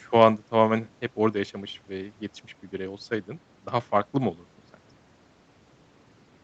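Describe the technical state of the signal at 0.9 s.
At 0.9 s the speech is intact, with no dropout, glitch or distortion, only the ordinary band limit near 8 kHz from the call microphone processing and the Opus call path.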